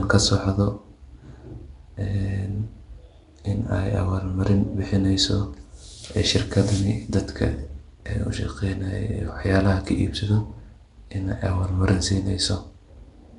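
Throughout, the speech has a rough, hissy halo and a smeared, underwater quality, with nothing above 10.6 kHz. The likely cause is Nellymoser compression, Flash's microphone codec, at a rate that fits 44 kbps, coding coarsely and filling starved bands with noise.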